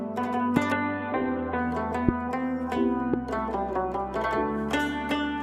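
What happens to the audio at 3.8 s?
Nothing goes wrong at 3.8 s; the audio plays straight through that moment without any dropout, glitch or other fault.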